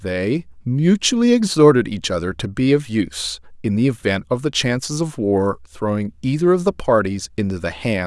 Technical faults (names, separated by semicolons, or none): none